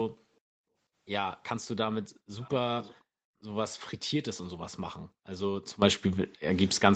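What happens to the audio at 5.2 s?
The echo canceller clamped the microphone from 5.02 to 5.25 s, leaving the background gated: room sound drops by about 40 dB, then returns.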